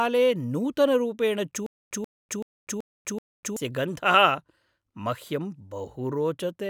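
Stutter with silent gaps runs from 1.66 to 3.57 s: a 134 ms fragment of speech repeats five times, each followed by about 246 ms of dead digital silence, a steady 380 ms cycle. This is likely a stalled stream replaying its last fragment at each retry, so the intervening speech is lost.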